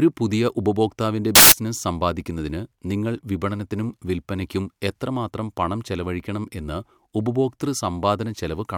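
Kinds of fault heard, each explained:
Samples built from the wrong bytes: from 1.35 to 1.52 s the speech becomes loud, harsh broadband noise, because each sample's bytes are misassembled and the fast-changing low bits take over. Unlike clipping, which roughens the sound, this replaces the speech with noise.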